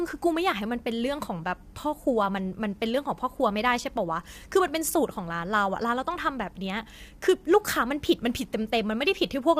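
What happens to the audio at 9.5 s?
At 9.5 s, as throughout the clip, the speech carries low-delay AAC compression, likely AAC-ELD at a bitrate that fits around 32 kbps, whose short frames resolve harmonics poorly, leaving the voice rough and grainy.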